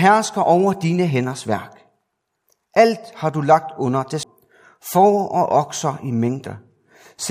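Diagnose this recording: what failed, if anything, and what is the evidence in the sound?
CD skip at 4.23 s, a playback fault at the disc transport stage. The speech cuts out for about 10 ms, then resumes at a different point, so the flow of the sentence breaks abruptly rather than fading. The laser's tracking was thrown off and landed on another turn of the spiral. The player muted briefly while it relocked and then carried on reading from that new position.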